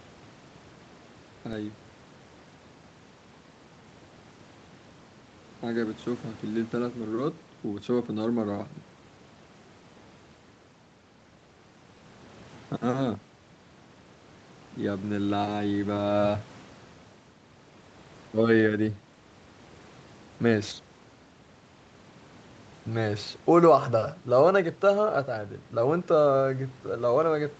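Nothing goes wrong in this speech recording, which simply carries the ordinary marks of a call, with the microphone processing and the Opus call path keeping everything below about 8 kHz.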